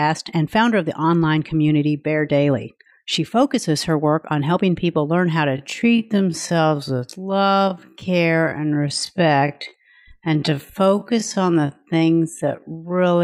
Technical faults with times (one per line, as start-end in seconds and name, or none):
5.46-13.23 time-stretched section